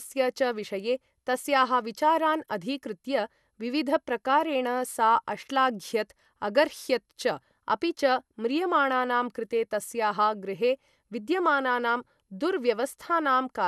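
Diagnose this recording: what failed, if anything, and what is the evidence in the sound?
The codec stage likely re-encoded the speech about four times, consistent with repeated MP2 passes near 128 kbit/s. This generation loss stacks fresh quantisation noise on shifting frame grids, leaving throughout a swirly, hollow, smeared sound, blurred consonant attacks, and nothing above 12.6 kHz.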